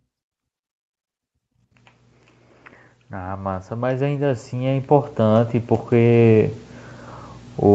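From 3.1 s to 6.61 s there's automatic gain rising: the gain control decided the speech was too quiet and ramped its gain up by about 15 dB, so voice and room noise swell together over those three and a half seconds, with everything topping out around 8 kHz through the call processing.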